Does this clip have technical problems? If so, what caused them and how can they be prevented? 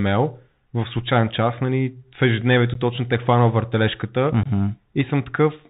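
Yes. The Bluetooth CVSD headset codec runs throughout: the one-bit, narrowband coding cuts everything above 4 kHz, leaves a granular hiss, and makes s sounds scratchy, which fits a 64 kbps CVSD link. Using a wideband-capable headset and phone (mSBC or LC3) prevents this.

Unconcealed Bluetooth headset packet loss occurs at 2.74–2.76 s, just after "час нали в ежедневието", and at 4.43–4.47 s, just after "точно те хванал въртележката". Roughly 15 ms and 22.5 ms of speech, a couple of packets and then a few, drop to silence or an idle pattern with abrupt edges. Keeping the headset close to the phone, away from interference, and using packet loss concealment prevents these holes.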